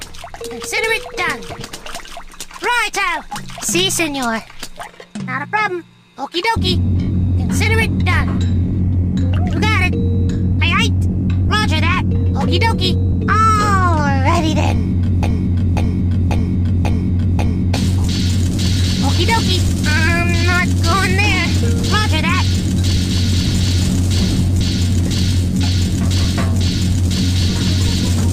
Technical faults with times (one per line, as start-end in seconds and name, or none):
15.23-17.74 broken-record loop